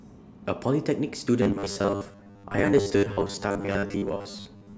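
From 1.42 s to 4.77 s the speech turns into robotic sound from repeated short buffers: a rigid, metallic 100 Hz buzz. The likely cause is audio arriving too seldom, so 10 ms segments repeat while about half the real signal is skipped. A spectrogram shows an even comb of harmonics at multiples of 100 Hz, and the waveform repeats in identical 10 ms cycles.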